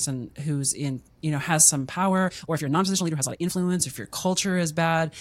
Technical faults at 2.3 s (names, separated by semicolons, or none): time-stretched section